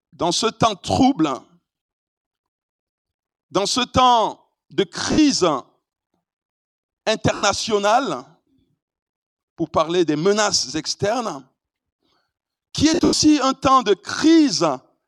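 At 5.12 s about 60 ms of audio drops out, which fits six lost 10 ms frames. At 7.35 s about 80 ms goes the same way. These are lost LE Audio frames. The LC3 decoder refills each gap by repeating the last spectrum with random signs, so tones smear into noise. From 12.94 s to 13.22 s, losses scatter across about 280 ms. The longest run is around 100 ms, and there the smear fades toward silence.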